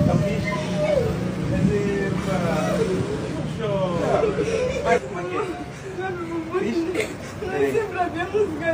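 Nothing stood out on listening; no technical fault could be heard at any point in the audio.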